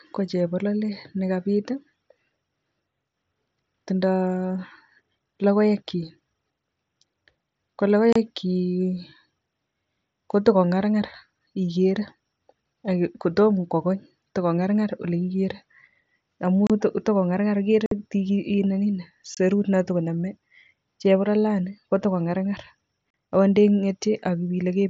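Unconcealed Bluetooth headset packet loss: short runs of voice packets between headset and phone never arrived, and nothing filled the gaps, so this speech clip drops to silence with hard-edged cuts at 8.13 s (30 ms), 16.67 s just before "takongarngar ak" (30 ms), 17.86 s after "amu takongarngar ak" (about 52 ms, the longest), 19.35 s (about 22 ms) and 23.12 s between "chebololani kotakongarngar" and "akot te" (about 38 ms). Each hole fits a few lost headset packets, heard over the wideband mSBC link.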